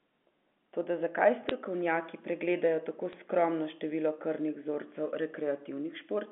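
Two short bursts of bit errors on a digital phone line crackle over the speech, at 1.49–1.51 s and at 3.13–3.16 s, the second falling between "pregledajo tako" and "skromno število". Flipped bits in the G.711 A-law stream, at an error rate of a few tenths of a percent, corrupt single samples. Where a sign or high-order bit is hit, the sample jumps and produces a sharp tick. On the waveform these show as isolated one-sample spikes. On the spectrogram they appear as thin vertical lines spanning the telephone band.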